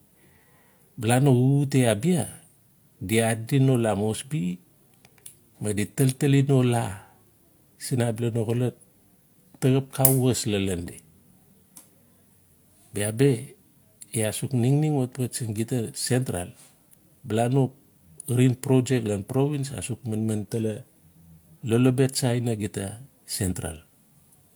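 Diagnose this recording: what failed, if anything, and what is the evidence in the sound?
Nothing failed in this speech recording, and no stage in the chain leaves an audible fault. No event in the sound points to a problem anywhere from the wiring through to playback.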